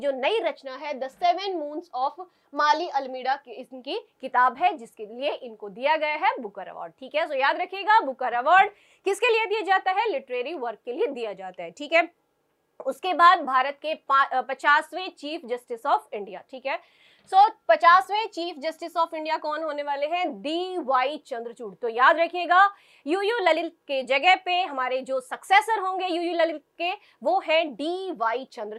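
No dropouts, glitches, distortion or level problems can be heard anywhere in the recording.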